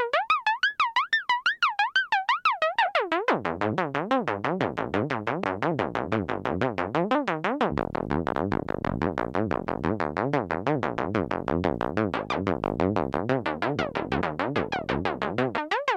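At 5.44 s there are skipped compressed frames. A run of encoded frames never reached the output, either missing from the file or rejected by the decoder as damaged, so the sound jumps ahead by something like 150 ms. The same thing happens at 14.2 s, with a shorter jump of around 50 ms.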